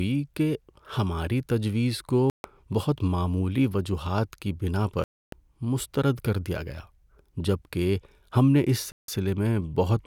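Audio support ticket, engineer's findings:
Three silent holes in the speech, which resumes further on as if it had kept playing. At 2.30–2.44 s (0.14 s), after "کہ ہماری تجویز" and before "بہت معمولی وجوہات کی". At 5.04–5.33 s (0.28 s), after "معمولی وجوہات کی بناء". At 8.92–9.08 s (0.16 s), after "جبکہ ہم نے اس". Likely a Bluetooth dropout on the headphone link: packets arrived too late, were discarded, and the output stayed muted until good packets arrived. The gap lengths fit runs of several consecutive lost packets.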